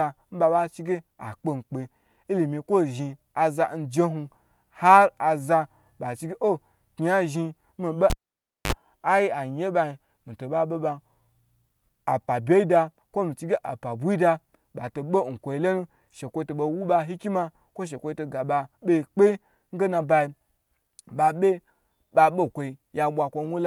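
At 8.1 s, after "ya zhin mi be", a cable pulled and plugged in: a pop, 0.57 s of near silence, then 49 ms of 50 Hz mains buzz before the sound returns at 8.72 s with a pop.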